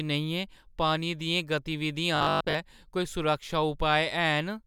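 Speech, and from 2.17 to 2.55 s it picks up robotic sound from repeated short buffers: a stiff, metallic 50 Hz buzz, likely from a roughly 20 ms chunk being replayed while the real audio is skipped for most of that stretch.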